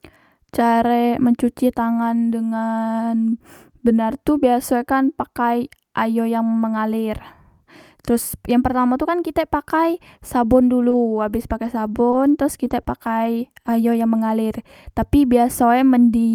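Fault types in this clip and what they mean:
Scattered short gaps: between 10.81 and 14.31 s, about five brief packet losses, none much longer than 20 ms, were patched by extending the preceding sound, leaving small ticks and hiccups in the speech across that stretch while it stays largely clear.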